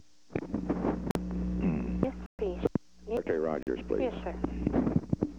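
At 1.11 to 1.15 s a block of digital silence cuts in: about 43 ms of zeros, which fits a 2048-sample buffer left unfilled, heard as a short hole. From 2.04 to 3.17 s, chunks are out of order: a 500 ms chunk plays one chunk late, producing a jumbled stretch with three abrupt joins. Unlike a dropout, nothing is missing, only misplaced. Inside it, 2.26 to 2.39 s is a longer 128 ms silent gap, and after it, 3.63 to 3.67 s repeats the 43 ms block.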